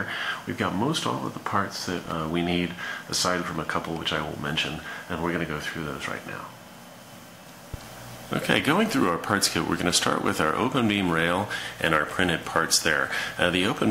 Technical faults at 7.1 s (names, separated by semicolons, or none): none